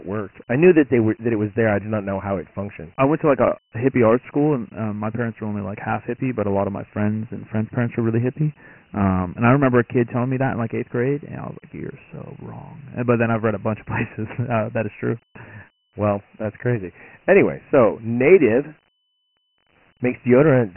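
Dialogic VOX ADPCM damage runs throughout: heavy 4-bit ADPCM coding, consistent with about 24 kbps at 6,000 samples a second, removes everything above 3 kHz and leaves gritty hiss trailing the speech.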